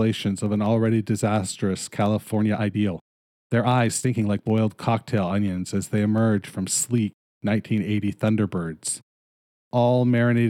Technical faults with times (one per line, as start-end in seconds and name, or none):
0.06-10.38 periodic USB or driver dropouts
2.28-4.56 time-stretched section